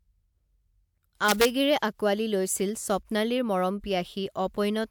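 From 1.29 to 1.45 s, just before "আকোৱালি লৈছিল স্বপ্নালীৰ মৰম", integer overflow: peaks about 2 dB over full scale wrap to the opposite sign, giving harsh cracks. The waveform shows full-range jumps; the spectrogram shows broadband vertical streaks.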